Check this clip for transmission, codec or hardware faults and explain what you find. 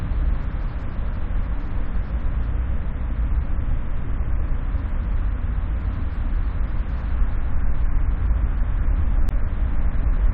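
One fault stands out near the end of the clip. From 9.28 to 9.31 s there is damaged data in the compressed stream. It lasts only about 36 ms. Part of the encoded data arriving there was corrupted. The decoder could not read those frames correctly and lost its place. It then had to hunt for the next valid frame header before playback could recover. The result is a brief chirp or blip that cuts across the sound.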